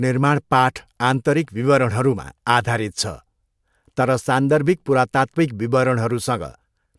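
No technical faults can be heard anywhere in this recording.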